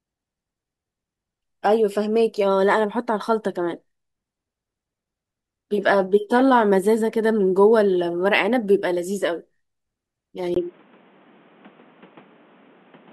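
At 10.54 s the speech turns dull and boxy after a brief gap of about 20 ms, and it stays that way to the end at 13.13 s. Nothing above 3.8 kHz remains, the level shifts by roughly 5 dB, and a new background hiss sits well beneath the speech. The likely cause is the input switched to a poorer device, such as a headset's call profile, whose narrower band, different gain and own noise floor replace the original microphone.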